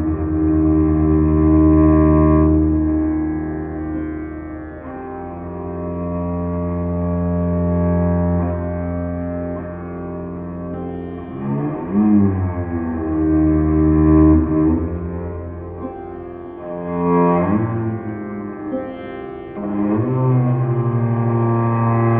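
Nothing technically wrong can be heard in this audio.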